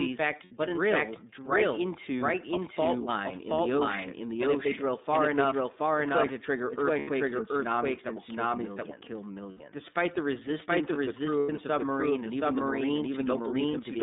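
From the first moment the whole speech track is doubled: a second full-band copy, about as loud as the original, trails it by roughly 0.7 s, most likely captured a second time by a slower path. Unlike an echo or room reflection, it has no decay or reverberant colouring, so it sounds like two identical voices out of step.

Throughout, the iLBC codec confines everything to about 200 Hz to 3.7 kHz. Its 30 ms frames are each coded independently, giving plainly audible roughness and a synthetic edge that differs from the smeared, watery artefacts of wideband codecs.

These are lost iLBC frames. At 0.45 s, between "but in" and "drill right into a", the decoder fills 60 ms by repeating the last pitch cycle mixed with noise, producing a brief held, buzzy vowel. The same happens for 90 ms at 6.99 s, at 9.51 s after "that will kill millions", and at 11.39 s between "resistance of the crew" and "the submarine". 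Unlike a dropout, these gaps are filled rather than silent, and the voice returns cleanly right afterwards.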